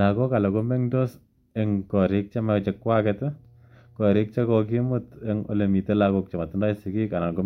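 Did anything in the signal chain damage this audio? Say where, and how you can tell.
Yes, mains hum entered in the analogue wiring. From 2.38 s to 5.46 s, just after "mengtos ing korick che", a steady low tone at 60 Hz sits roughly 30 dB under the speech. A ground loop or nearby transformer is coupling the power line into the signal path. Its fixed pitch and constant level set it apart from handling noise or wind rumble, which are broadband and fluctuate with movement.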